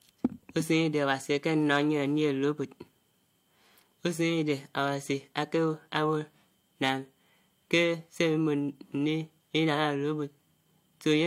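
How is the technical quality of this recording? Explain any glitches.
No glitches or technical faults can be heard anywhere in the recording, so there is nothing to explain.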